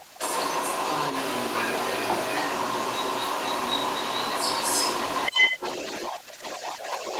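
This speech clip carries a second voice alongside the talker from 0.0 to 7.2 s, sitting about 10 dB above them: the other side's voice leaking through, likely loudspeaker echo the canceller failed to remove. The talker's level also dips by about 10 dB around 5.31–5.62 s and 6.09–6.67 s, speech suppressed in double talk, likely the canceller turning both voices down when they overlapped.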